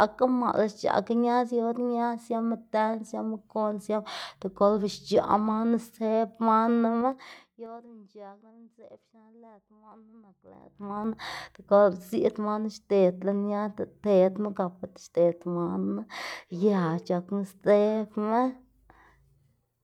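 From 6.96 to 7.88 s a dry ticking rides on the speech as the level falls by roughly 25 dB, and from 10.44 to 11.04 s the same zipping returns as it climbs back by about that much. This is zipper noise. The gain moves in unsmoothed 3 dB jumps, around ten per second going down and nearer fifteen going up, and each abrupt jump leaves a small click in the waveform.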